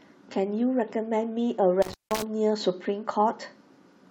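From 1.82 to 2.22 s the speech crackles and drops out, with a gap of about 170 ms where only faint hiss remains before it returns with more crackle. This is intermittent contact: a loose cable or plug briefly lost its connection, opening the signal path.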